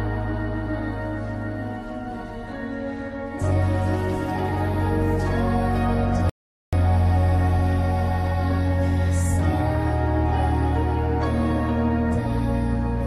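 A rebuffering stall interrupts the audio at 6.30 s: the sound drops to silence for about 0.43 s, until 6.73 s, then picks up exactly where it stopped. Unlike a dropout, nothing is skipped; the player waited for data, adding time.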